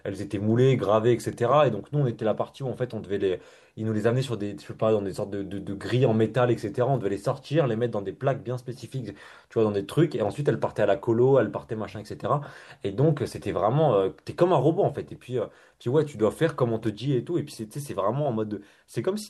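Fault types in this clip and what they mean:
Electrical switching spike: two sharp snaps sit on top of the speech, one at 1.33 s and a longer cluster from 16.87 to 16.89 s, both at around -30 dBFS. Likely a nearby switch or motor arcing into the audio line.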